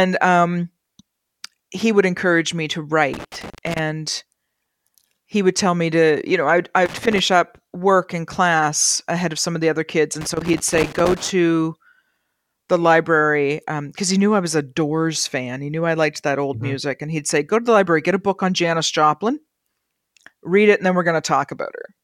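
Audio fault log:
3.14–3.79 s, 6.86–7.19 s, 10.21–11.30 s: loose connector crackle, after "would encourage me to", between "know I would I" and "up work in class", and after "of the other kids". A worn contact keeps making and breaking, chopping the signal into irregular scratchy bursts, with pops where DC on the line jumps.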